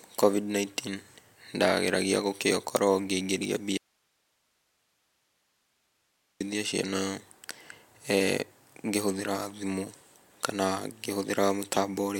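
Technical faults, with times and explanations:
3.77–6.40 s: audio dropout to a faint residue. Speech cuts off abruptly, leaving only hiss roughly 45 dB down, likely a lost signal on a still-live path, not a pause.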